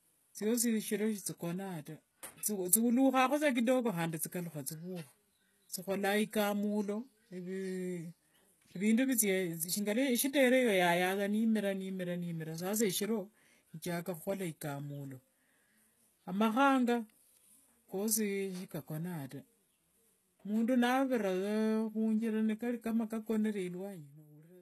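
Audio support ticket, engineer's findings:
Whole clip, start to finish: treble on the speech sounds bright but fake, s sounds gritty and lispy with a metallic edge, nothing at all above 12.3 kHz. Likely HE-AAC compression, heavy damage, fits a very low bitrate around 16 kbps. Top band is rebuilt from copied lower bands under a coarse envelope, so harmonics don't line up across the crossover.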